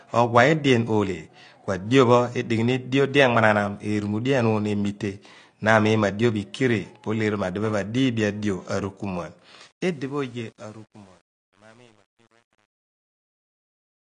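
All the way through, the speech sounds dull and a bit smeared, with nothing above 9.8 kHz and a warbly, fizzy edge on sibilants. That's plainly audible AAC compression, likely AAC-LC at a low rate, and the sound fits something around 32 kbps.

From about 9.68 s the closing fade-out picks up truncation distortion on a fade. The level stage isn't keeping enough bits or adding dither, so the shrinking waveform turns into coarse steps, which fits roughly a 9-bit word length. It turns gritty from about 10.12 s to the end.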